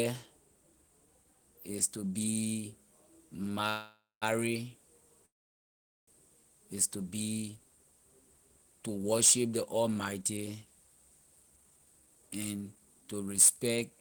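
Call audio freeze at 3.69 to 4.24 s and again at 5.26 to 6.09 s: the speech stops mid-flow, and the last sound is stretched into a fading buzz that falls silent for the final 170 ms of the first gap and for almost all of the 818 ms second gap. It then resumes exactly where it left off, with nothing skipped, so each pause adds its full length to the delay. The likely cause is packets held up in transit, leaving the receiver's jitter buffer empty.

Jitter buffer speed-up from 11.26 to 13.27 s: the speech runs at about 113% of normal speed while the pitch stays unchanged, so it sounds hurried. Having built up more delay than it aims for, the receiver trims many short pitch-period-sized slices in quick succession, roughly a third of a second in total, to bring the delay back down.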